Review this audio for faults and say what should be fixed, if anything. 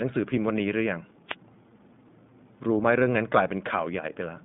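The iLBC codec runs throughout. Nothing above about 3.7 kHz survives, and the speech sounds rough and synthetic, which fits independently coded 20 ms frames. Record or send over a wideband codec instead.

A wireless microphone noise hit, a short static burst from 1.27 to 1.36 s, comes from a radio fade. Use diversity receivers and keep the transmitter in clear line of sight.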